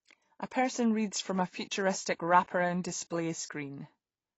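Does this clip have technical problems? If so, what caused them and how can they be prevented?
Yes. Throughout the speech the sound is dull and smeared, with nothing above about 7.9 kHz and a warbling, fizzy texture on sibilants and held sounds. The likely cause is AAC compression at a low bitrate, which fits AAC-LC at around 24 kbps. With so few bits to spend, the encoder cuts off the top band entirely and quantises the remaining frequency lines coarsely, leaving gaps that shift from frame to frame. To prevent it, encode speech at 64 kbps or more, or keep an uncompressed master.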